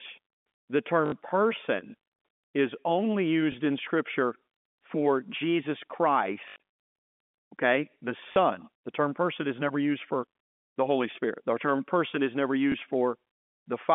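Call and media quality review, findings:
Packet loss with last packet repeated: short robotic stutters at 1.06–1.12 s (60 ms) and 8.32–8.36 s after "okay the"; small blips at 3.52–3.54 s after "person is only" and 12.72–12.74 s after "term person is never". Worst at 6.48–6.56 s: about 180 ms lost, scattered over 280 ms, longest run 80 ms. Receiver jitter buffer/concealment replaying the last frame, buzzing near 50 Hz, which fits 20 ms packets. The G.711 line band (200–3500 Hz) is audible throughout.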